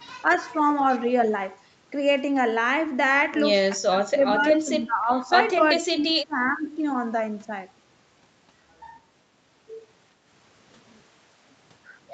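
Right at the start, around 0.23 to 0.3 s, the voice dips by a few dB for a brief moment. That's speech suppressed in double talk, likely the echo canceller ducking everything because it couldn't separate this talker from the far side's loudspeaker echo. It comes back harder from 3.89 to 5.29 s, with about a second of speech pulled down by roughly 15 dB, and again from 5.76 to 6.67 s, where some of it sinks by about 25 dB.

Close to those same moments is an echo leak. A delayed copy of the voice trails the original by about 0.37 s, likely because the loudspeaker side's canceller didn't fully remove what its microphone picked up from the loudspeaker. It's a faint scrap at 0.31 to 0.37 s, quite a bit louder at 4.43 to 4.53 s, at roughly 20 dB under the speech, and in between at 5.97 to 6.12 s.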